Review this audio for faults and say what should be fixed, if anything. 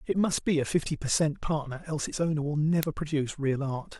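There's an uninitialised buffer at 2.83 s: a tiny burst of garbage, about 0.73 ms, fitting a 32-sample block played before anything was written. Zero-fill buffers before handing them to playback.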